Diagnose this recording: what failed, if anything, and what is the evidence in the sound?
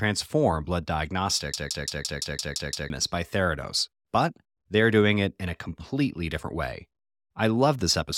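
Driver-level system hang loop: from 1.54 to 2.90 s one 171 ms slice stutters eight times, the hardware replaying what fits a frozen 8192-sample buffer.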